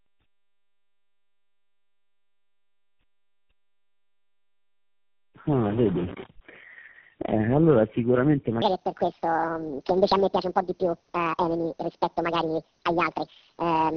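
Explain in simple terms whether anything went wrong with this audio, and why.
Two things went wrong. Throughout, the speech shows tandem speech coding: it sounds muffled, rough and warbly. That points to roughly four phone-network speech codecs in a row, each re-compressing the previous one's already damaged output.

From 8.62 s to the end there is a section at the wrong speed. It plays 1.68 times too fast, so the speech turns hurried and jumps nearly an octave higher. The likely cause is playback or editing locked to the wrong clock.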